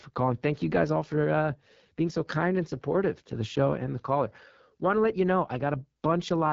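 Speech all the way through, and it has the unmistakable sound of the AMR wideband (HD Voice) codec. The speech model rebuilds everything up to 6.4 kHz from a pulse-excited vocal tract model, and only shaped noise fills the band above that. Here the damage is plainly audible: the speech comes out rough and raspy, which fits AMR-WB's 8.85 kbit/s mode, one of its two lowest. Nothing comes through above 7.5 kHz either, so the top end just stops.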